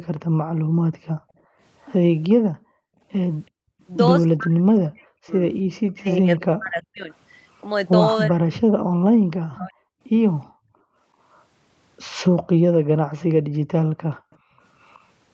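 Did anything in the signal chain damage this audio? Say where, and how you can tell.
Yes. Between 0.18 and 3.81 s, and again from 10.0 to 14.6 s, the room background dips and vanishes, falling by about 40 dB for roughly two seconds each time. This is background gated by the echo canceller in the call processing, which clamped the microphone while the far end played.

A faint delayed copy of the speech trails the original by 374 ms, at about 35 dB below it from 1.81 to 3.83 s. It grows to about 20 dB below from 7.12 to 15.04 s. The fixed delay points to an echo leak, likely residual loudspeaker pickup the canceller failed to subtract.

From 4.37 to 9.72 s the talker's speech sinks in chunks, losing about 40 dB for around three seconds in total, while the other side is active. The likely cause is speech suppressed in double talk: the canceller could not separate the near voice from echo, so it attenuated both.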